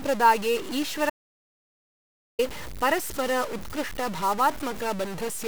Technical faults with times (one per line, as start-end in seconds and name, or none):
0.00-5.48 stuck bit
1.10-2.39 audio dropout to silence